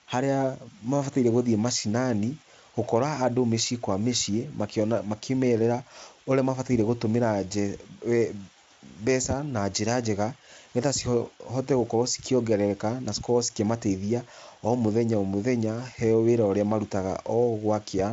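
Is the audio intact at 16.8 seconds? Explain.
Yes, at 16.8 seconds the speech is intact, with no fault to be heard at that moment.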